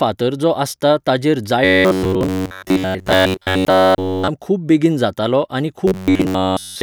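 From 1.65 to 4.28 s, after "जो आसता ताचेर", the speech becomes a rigid, metallic buzz at 93.8 Hz. This is robotic sound from repeated short buffers. A roughly 11 ms slice is likely being looped in place of most of the real audio. The buzz returns from 5.88 s after "खूब बेगीन जातालो आनी" and runs to the end, now replacing nearly all of it.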